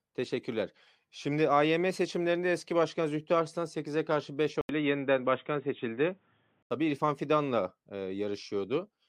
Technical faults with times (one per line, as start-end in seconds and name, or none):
4.61-6.71 input switched to a poorer device